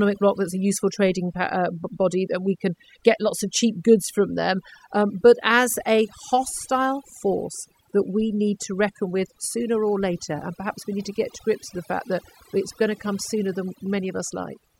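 Overdone noise removal runs throughout, pulling frequency bands near the noise estimate down hard, leaving near-silent gaps with twinkling specks.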